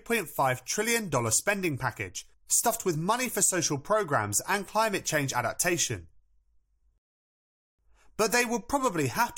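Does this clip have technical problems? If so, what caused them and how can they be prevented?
Yes, there's a rebuffering stall in this speech clip. At 6.98 s the sound drops to silence and picks back up at 7.79 s, right where it left off, so nothing's missing but about 0.81 s of dead air gets added. That's the player draining its downloaded audio and waiting for more to arrive before continuing. To prevent it, keep a deeper playback buffer or drop to a lower bitrate when the connection slows.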